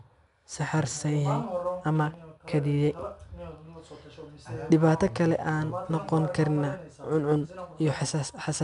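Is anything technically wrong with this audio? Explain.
Yes. Throughout the speech, 4-bit ADPCM compression adds a gritty hiss that rises and falls with loudness because each sample is coded as a coarse step from a prediction. Nothing sounds above 10.6 kHz, which fits a stream near 89 kbps. A spectrogram shows broadband noise smearing under loud syllables and a flat ceiling at 10.6 kHz.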